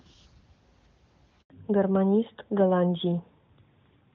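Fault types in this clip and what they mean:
Handover gap at 1.42 s: the call was passed between networks and no speech frames arrived during the switch, so the voice dies away and the line stays silent for 80 ms until the new link starts carrying audio, losing whatever fell in that stretch.
Fallback to narrowband from 1.50 s: the speech, carried in clean HD Voice up to this point, drops to an older narrowband codec after the handover, so nothing above 4 kHz remains through to the end and the voice sounds duller and rougher.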